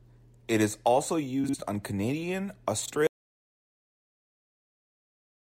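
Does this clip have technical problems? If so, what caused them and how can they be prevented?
Yes, there are two kinds of fault.

Frames out of order occurs twice. From 1.44 to 1.54 s, just after "is also", two blocks of about 48 ms play in swapped order. From 2.85 to 2.91 s, two blocks of about 24 ms are exchanged, which fits single frames. Each stretch sounds like a brief garbled flutter. Unlike a dropout or packet loss, no audio is missing and no time is lost; the sound is only rearranged. Sequence numbering with a reordering jitter buffer before decoding prevents this.

Audio dropout to silence begins abruptly at 3.07 s and lasts to the end. What follows is silence with no room tone or noise floor. That separates it from a natural pause or a fade-out, which keep some background sound and ease down rather than cutting off. The likely cause is a lost input, such as a disconnected device, a failed link or an accidental mute, while recording continued writing silence. 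Secure connections and a silence alarm on the input level prevent this.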